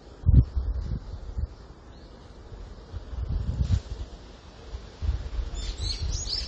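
From start to finish, the audio carries plainly audible AAC compression artefacts, likely from AAC-LC coding at a low bitrate; the damage fits something around 32 kbps. The encoder dropped everything above 9 kHz and coarsely quantised what remained, so the sound is dull and smeared, with a watery, fizzy shimmer on sustained parts. A spectrogram would show a hard ceiling at 9 kHz and patchy, blocky holes in the upper bands.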